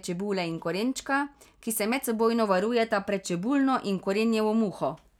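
Nothing in this speech recording stands out as a technical fault: no dropouts, glitches or other problems turn up anywhere along the way.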